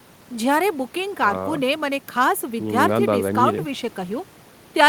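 Speech recording, nothing technically wrong heard anywhere in it.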